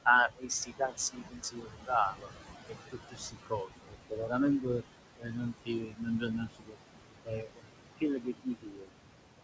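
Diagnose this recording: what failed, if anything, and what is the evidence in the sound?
Noise suppressor artifacts run through the whole clip, from the call-processing stage. The room noise, which sits only about 8 dB under the speech, is pulled down by about 21 dB in the gaps and swells back under speech.

Speech cut by the noise suppressor happens in four spans: 0.05 to 2.3 s, 2.68 to 4.83 s, 5.18 to 6.77 s, and 7.25 to 8.92 s. About a second of each span sounds faint, dropped by up to about 21 dB. With speech this close to the noise floor, the suppressor mistook parts of the speech for noise. The codec band limit, with nothing above 8 kHz and consistent with G.722, is working normally.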